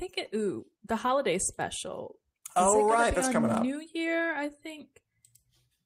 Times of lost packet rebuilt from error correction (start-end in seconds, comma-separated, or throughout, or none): 4.19-4.29